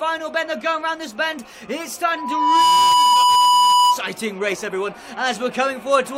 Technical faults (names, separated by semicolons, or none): loudspeaker feedback squeal; damaged data in a compressed stream